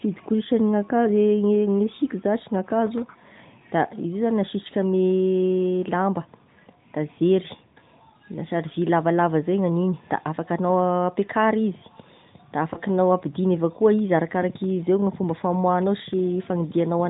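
At 12.74 to 12.79 s, just before "apidigny avy akoa izy", a single lost AMR speech frame (one 20 ms frame) leaves a brief dip and warble. The narrowband decoder fills it by repeating the previous pitch at lower gain, so the sound smears rather than dropping into a silent gap or click.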